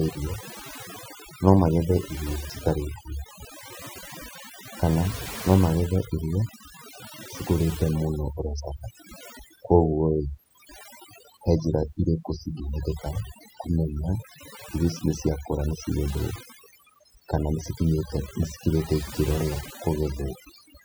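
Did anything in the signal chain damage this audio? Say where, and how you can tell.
Yes. Throughout this speech recording, the noise suppression stage shows overdone noise removal. The background between phrases drops to near silence sprinkled with twinkling specks. The suppressor's gain is set so hard that any frequency band close to its noise estimate is pulled far down or switched off, taking the quieter parts of the voice with it. Unlike a low-bitrate codec's swirl, the damage sits mainly in the gaps and on the soft edges of speech.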